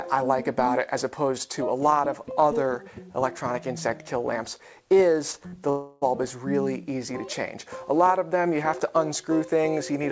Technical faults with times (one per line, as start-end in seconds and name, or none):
5.32-5.35 short concealed packet loss
5.47-5.54 burst of packet loss
5.70-6.03 long network dropout